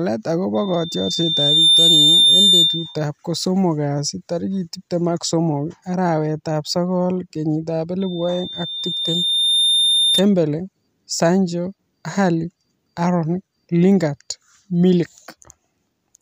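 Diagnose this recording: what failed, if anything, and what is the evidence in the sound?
Loudspeaker feedback squeal in the analogue acoustic loop: a 3.6 kHz tone swells over the speech from 0.54 to 3.06 s and again from 8.00 to 10.25 s. They build over about 1 s and 1.5 s and top out roughly 10 dB and 5 dB above the speech. The microphone is hearing its own loudspeaker, and loop gain exceeds one at that frequency. The gradual swell separates it from a steady interference tone.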